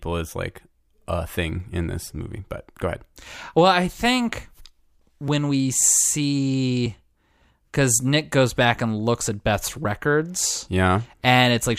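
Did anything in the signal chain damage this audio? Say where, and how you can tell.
Yes. At 5.28 s the speech gives a small jump forward in the sound, likely a dropped buffer (overrun) at the driver or buffer stage: the capture side did not collect its samples in time, the hardware overwrote them, and a few milliseconds were lost, with the audio on either side joined directly. Unlike an underrun or network dropout, no gap of silence is inserted; the sound simply skips ahead at the splice.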